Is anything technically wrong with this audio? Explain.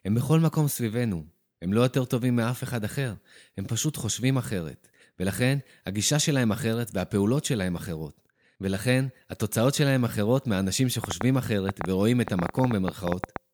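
Yes. From 11.04 to 13.37 s a train of clicks, about twenty irregularly spaced pulses at roughly 7.75 per second, ticks well above the speech, likely from electrical interference or a faulty connection.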